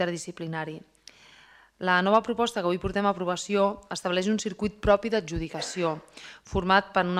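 No technical fault can be heard anywhere in this audio. There is nothing to point to in time and no cause to explain.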